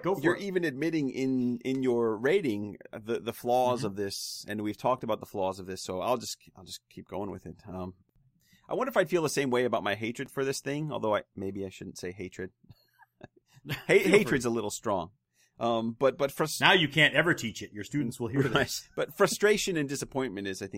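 A brief click at 10.26 s, between "same way about my" and "for this thing", is a repeated buffer: fresh audio arrived late, so a piece of about 5 ms played once more with hard joins, and roughly 5 ms of audio was lost.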